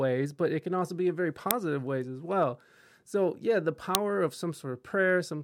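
A speech clip with two uninitialised buffer faults, at 1.51 s and 3.95 s. Each is a very brief, loud crack, about 1.3 ms and 0.7 ms long, which fits blocks of 64 and 32 samples played out before any audio was written to them, so leftover memory was heard as samples. Unlike a dropout, which leaves a silent gap, this fault fills the gap with loud junk data.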